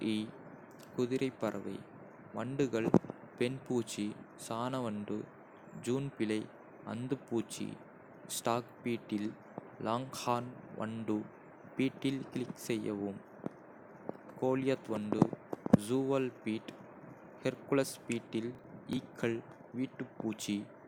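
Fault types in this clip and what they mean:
Processor overload crackle: the processor falls behind and misses a run of tiny buffer deadlines, roughly seven of them, each dropping a few milliseconds of sound. Right after "ஹெர்குலஸ் பீட்டில்", from about 18.55 to 18.97 s, the speech turns into gritty, gappy crackle.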